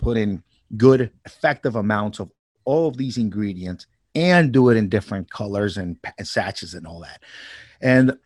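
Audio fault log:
No fault found in the speech at any point.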